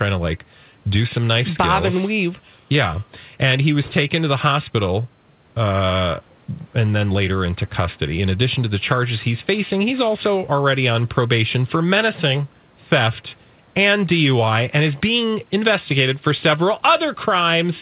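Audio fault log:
No faults heard in this clip.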